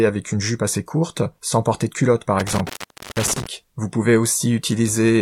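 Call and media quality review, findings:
Intermittent contact, 2.39–3.47 s: loose cable or plug opening, speech cut for 0.48 s with crackle at the edges. Waveform: spiky clicks around near-flat gaps holding only faint hiss.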